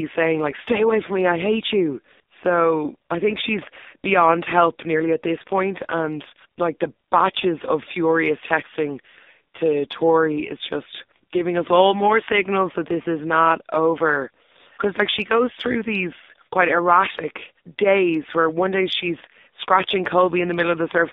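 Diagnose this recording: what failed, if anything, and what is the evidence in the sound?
The whole thing has been through an AMR narrowband mobile codec, so the failure is at the codec stage. All 21 seconds sit between roughly 250 Hz and 3.7 kHz, with nothing at all above 4 kHz. The speech has that heavily damaged, buzzy, synthetic edge you get when a few excitation pulses per subframe are driving a vocal-tract model on a tight bit budget, which fits AMR-NB's 5.9 kbps mode. None of that detail comes back.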